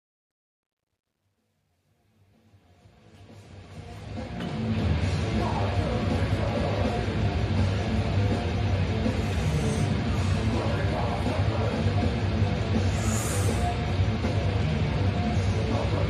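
Truncation distortion on a fade runs from the start to 4.89 s, worst over the first 3.07 s. The fade-in keeps only 11 bits without dither, so its quiet opening collapses into square steps, sounding gritty before the level smooths out.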